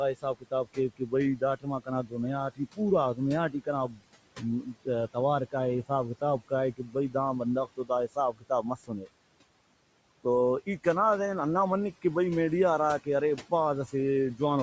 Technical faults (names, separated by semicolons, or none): noise suppressor artifacts; speech cut by the noise suppressor